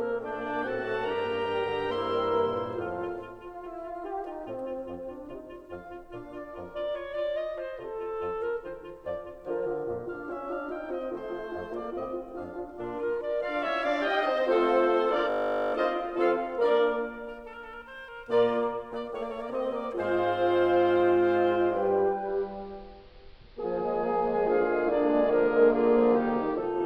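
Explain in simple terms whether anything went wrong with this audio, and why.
Two faults are audible in this music. At 15.3 s a system hang loop occurs: the computer briefly froze while the sound hardware kept replaying the same 20 ms slice of audio, 22 times, until 15.74 s. That fast repetition comes out as a steady buzz at 50 times per second.

From 22.08 s to the end, the sound shows digital radio blending to analogue. The receiver lost its digital signal and faded over about a third of a second to the station's AM broadcast. The level shifts, and faint hiss appears underneath.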